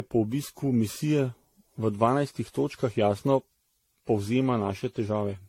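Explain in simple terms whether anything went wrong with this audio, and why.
The speech was likely squeezed and unpacked around ten times in a row, causing generation loss: from start to finish it sounds swirly, hollow and smeared, with blurred word onsets.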